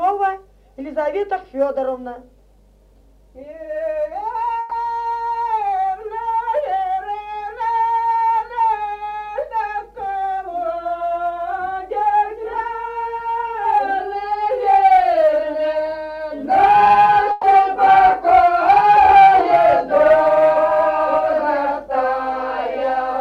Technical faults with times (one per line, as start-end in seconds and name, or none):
4.59-4.73 burst of packet loss
17.31-17.45 burst of packet loss